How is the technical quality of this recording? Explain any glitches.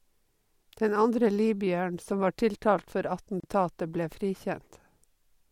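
One glitch affects this speech recording: a gap at a join of encoded pieces. From 3.40 to 3.44 s, just after "som var tiltalt for", the sound drops out for about 34 ms and then resumes where it stopped. The pieces were encoded separately and spliced without trimming, so the encoder's start-up delay and final-frame padding remain as a short silence with smeared edges.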